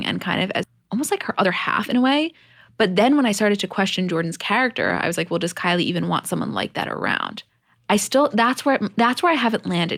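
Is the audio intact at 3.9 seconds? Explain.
No. At 3.9 seconds the speech is inside a stretch from 2.74 to 4.32 s that runs hurried, about 7 percent faster than normal, while the pitch stays unchanged, until it settles just before "character I was like". This is a jitter buffer speed-up: with too much audio queued, the receiver trimmed many tiny pitch-period-sized slices in quick succession, shaving off roughly a tenth of a second to catch up.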